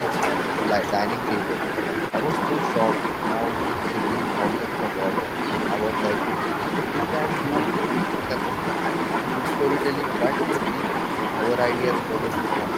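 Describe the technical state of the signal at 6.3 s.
At 6.3 s the speech signal is intact, with no audible fault at that moment.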